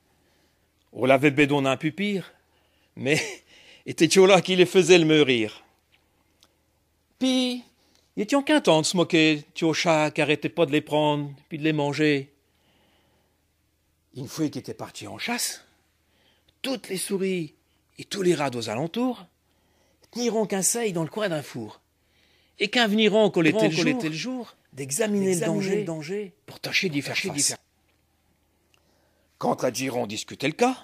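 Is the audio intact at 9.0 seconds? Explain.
Yes, the audio at 9.0 seconds is intact, with no dropout, click, distortion or other fault at that moment.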